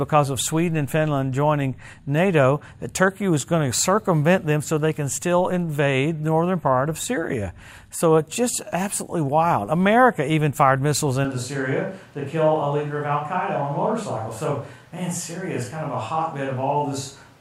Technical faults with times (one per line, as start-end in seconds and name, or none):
11.25-17.40 switch to a distant microphone